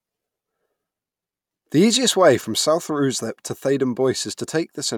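Nothing in the speech stood out as a technical fault on listening.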